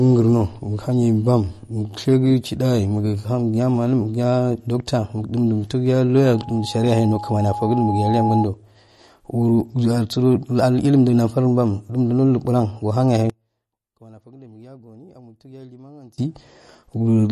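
From start to finish the speech has a hard ceiling, with nothing above 13 kHz. Weak high detail flickers in and out, giving a watery, swirly texture, and s sounds turn metallic while consonant attacks smear. This is likely MP3 compression. When the encoder runs short of bits it cuts the treble at a fixed frequency and drops low-energy spectral lines frame by frame. The damage is plainly audible and fits a low bitrate of around 40 kbps.

Between 6.16 and 8.49 s a loudspeaker feedback squeal appears. A single tone at 830 Hz swells steadily for about two seconds until it is roughly as loud as the speech, then stops at 8.49 s. The mechanism is a closed acoustic loop: the microphone picks up the loudspeaker it feeds, and at 830 Hz the loop gain exceeds one. That one frequency then reinforces itself on every pass.

From 13.30 to 16.18 s the centred voice collapses by about 25 dB. What remains is a faint residue rather than the full voice. 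This behaviour points to one channel inverted, likely a reversed polarity on one side of the stereo pair. When the two channels are summed to mono, the content common to both cancels, and only the small difference between them survives.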